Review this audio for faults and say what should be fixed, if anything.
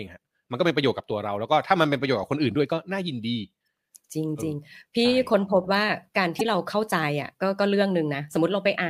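Damaged data in a compressed stream produces brief disruptions in this speech at 3.64–3.67 s and 6.37–6.41 s. Corrupted bytes make the decoder misread frames and hunt for the next header. Unlike a clean dropout, which leaves silence or smooth concealment, these come from misread frames. Checksum and re-fetch the file or stream, and keep metadata out of the audio payload.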